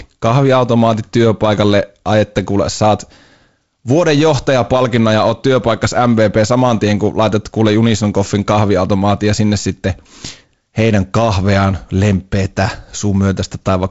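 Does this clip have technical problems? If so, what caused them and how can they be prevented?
No, nothing in this speech stood out as a technical problem on listening.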